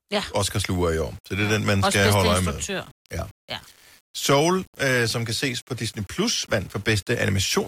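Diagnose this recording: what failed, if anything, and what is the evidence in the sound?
From 0.45 s to the end, the speech carries a gritty, grainy distortion that follows the voice, with quiet tails sputtering or dropping out. It is likely low bit depth without dither at a sample-format conversion: rounding to about 7 bits leaves signal-tracking error roughly 30 dB down.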